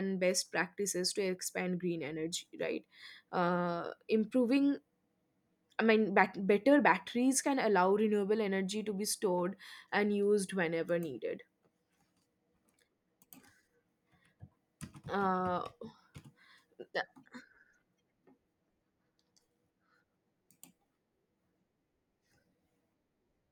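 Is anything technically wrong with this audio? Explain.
No, nothing technically wrong turns up anywhere in this speech recording, so there's nothing here to flag.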